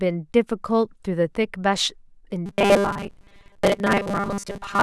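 Speech that from 2.46 s to 4.83 s turns into a rigid, metallic buzz locked at 200 Hz. This is robotic sound from repeated short buffers, likely a 5 ms slice looped while most of the real audio is skipped.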